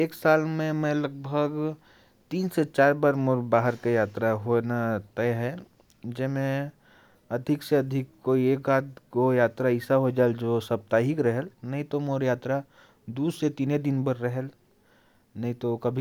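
A recording of speech, with no technical faults to report. Nothing in the audio points to a problem in how it was captured, processed or delivered.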